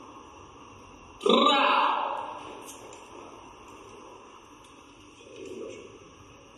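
No technical faults can be heard anywhere in this recording. There is nothing to flag at any point in it.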